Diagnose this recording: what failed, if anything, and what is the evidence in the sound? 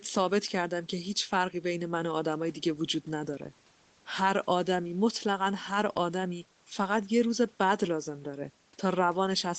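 Nothing in this speech recording points to a failure at any stage, and the only thing worth noting is that the top end stops at about 8 kHz, which is just what you'd expect from a normal call path with its microphone processing and a wideband Opus setting.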